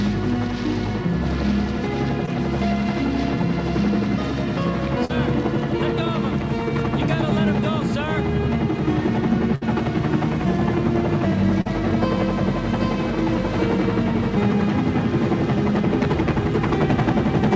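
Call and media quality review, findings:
Short concealed packet loss, 2.26–2.29 s: brief smear or wobble, about 20 ms of audio missing. Jitter buffer or decoder concealment extends the last sound for about 12 ms, then crossfades. Spectrogram shows smoothed, repeated frame.

Short concealed packet loss, 5.05–5.11 s and 11.61–11.67 s: 40 ms and 38 ms wobble, about 40 ms of audio lost each and bridged by extrapolated content. Blend seam at the end.

Burst of packet loss, 9.55–9.63 s: held buzz or fading hiss, then a jump forward with about 60 ms of audio gone. Consecutive frames lost, and concealment synthesises about 63 ms with decaying gain. Spectrogram shows a frozen, fading band with a hard resume edge.

Call path: band-limited, with nothing above 8 kHz on the spectrogram, which fits G.722 at 64 kbps.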